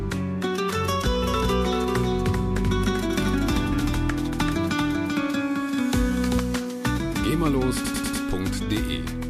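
From 1.22 s to 6.38 s, a second, full-band copy of the sound trails the original by roughly 0.4 s at about 5 dB quieter. It starts and stops abruptly and carries no reverb tail. This doubled audio track likely comes from a slower capture path mixing the same audio in a second time.

From 7.84 s to 8.22 s the sound stutters, replaying the same 96 ms slice four extra times. These repeated frames come from a block of compressed data sent or written again, lengthening the audio by 0.38 s.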